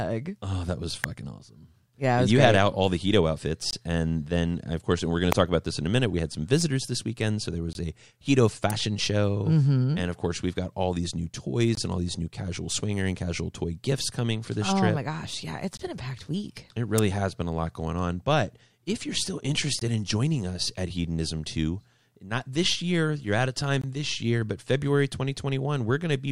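Right after "that was", at 1.04 s, there's a sharp snap, an electrical switching spike, likely a nearby switch or motor arcing into the line. At 3.71 s the first gap between chunks opens, a hard-edged 21 ms hole where the audio was delivered in 4-second chunks. The same kind of click as the first spike lands at 5.32 s. Another gap follows at 7.73 s after "this weekend so there", then a further spike at 8.70 s. More gaps come at 11.75 and 15.77 s, then a spike at 16.98 s, and gaps again at 19.79 s and 23.82 s, that last one between "year you're out of" and "this year but".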